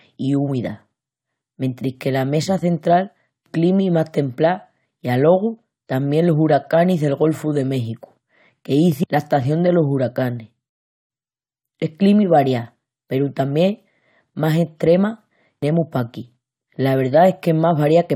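At 10.69 s the speech drops to silence for 0.41 s, then picks up exactly where it stopped: a rebuffering stall, the player waiting for more downloaded audio.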